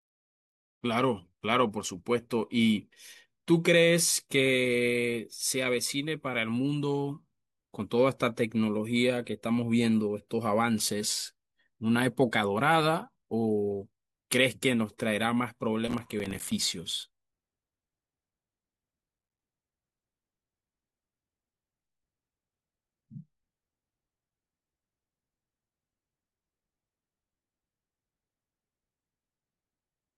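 From 15.88 to 16.52 s there's processor overload crackle: dozens of missed buffers of about 5 ms each drop to silence, giving a gritty, tearing burst over the speech.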